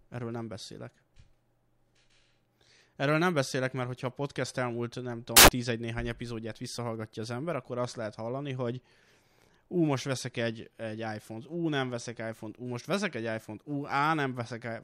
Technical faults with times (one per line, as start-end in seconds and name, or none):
5.37-5.48 samples built from the wrong bytes